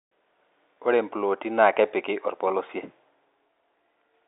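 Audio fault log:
0.74–0.76 s and 2.48–2.50 s, packet loss with pitch repetition: each time about 20 ms of audio went missing, which fits a single lost packet, and the receiver filled the hole by repeating the last pitch period, so the speech briefly holds a slightly buzzy, frozen tone before resuming over the narrow telephone band.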